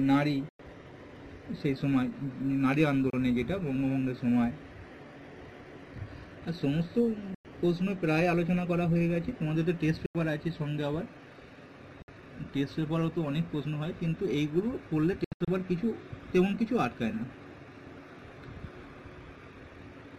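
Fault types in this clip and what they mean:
Bluetooth dropout: Packets of audio most likely failed to reach the headphones over the wireless link in time and were discarded, so playback fell silent until fresh packets arrived, then picked up further along as if it had kept running. Holes appear at 0.49, 3.10, 7.34, 10.06 and 12.02 s, lasting from 29 to 102 ms, and between 15.24 and 15.48 s a cluster of short gaps, the longest 73 ms, removes about 174 ms of sound.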